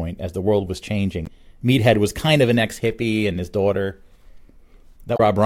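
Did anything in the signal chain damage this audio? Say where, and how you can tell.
Yes, at the codec or storage stage: damaged data in a compressed stream. Right after "as the world was" there's a short glitch from 1.24 to 1.28 s, and another from 5.14 to 5.20 s, where the decoder hit corrupt frames and lost sync.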